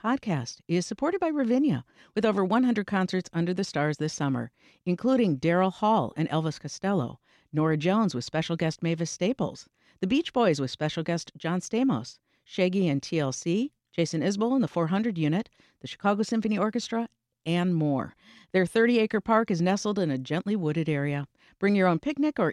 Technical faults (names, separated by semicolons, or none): none